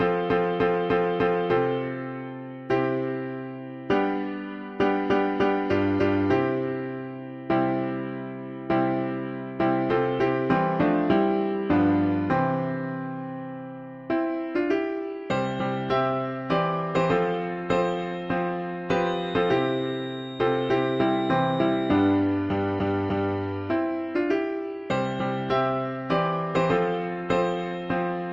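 From 18.94 s to 22.25 s a thin, steady whistle sits behind the sound at about 3.7 kHz, roughly 20 dB below the main signal. This is a feedback whistle, likely from a loudspeaker-to-microphone loop poised just at the edge of feedback, so one frequency rings on without escalating into a howl. Its slow swelling and fading in level sets it apart from a fixed electrical interference tone, which would hold perfectly constant.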